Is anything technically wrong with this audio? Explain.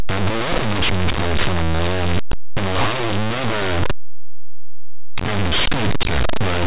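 Yes. Throughout the speech, the sound is very loud, harsh distortion. This is linear audio read as companded: plain linear 8-bit samples decoded as mu-law codes, so tiny values just to one side of zero expand to the loudest outputs while the other side stays small.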